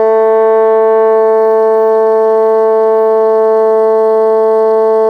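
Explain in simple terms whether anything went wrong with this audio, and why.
Nothing went wrong with this music; there are no technical faults to hear anywhere in it.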